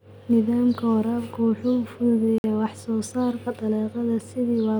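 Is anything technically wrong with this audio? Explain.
Yes. At 2.38 s the speech drops abruptly to silence for about 58 ms, returning at 2.44 s. This is likely a Bluetooth stall: radio interference delayed packets, the headphones' buffer emptied, and playback paused until retransmitted audio arrived.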